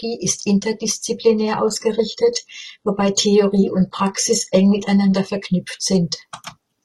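From 1.29 s to 5.29 s the speech drops to an adaptive stream at a lower bitrate: codec artefacts rise, nothing above 11.8 kHz, pointing to an HE-AAC rendition near 16 kbit/s. Unlike packet loss, quality switches abruptly both ways with no gap.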